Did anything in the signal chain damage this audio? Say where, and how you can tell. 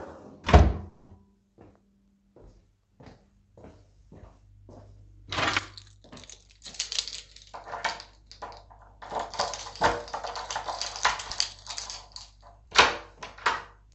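Yes. A call audio freeze at 0.89 to 1.11 s, in the network and jitter-buffer stage, most likely from delayed packets. The last sound is stretched into a fading buzz for about 200 ms, then the sound resumes where it stopped, with nothing lost but everything afterwards 200 ms late.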